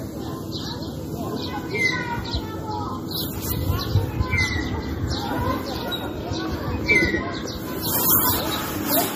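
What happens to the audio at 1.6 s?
At 1.6 s the sound has a watery, swirling texture, with sharp attacks smeared and nothing above 15.3 kHz. This runs through the whole clip and is plainly audible. The likely cause is MP3 compression at a bitrate that fits about 40 kbps. With so few bits, the encoder cuts the treble at a fixed point and drops weaker frequency components. Those components then flicker in and out from frame to frame, which produces the swirl.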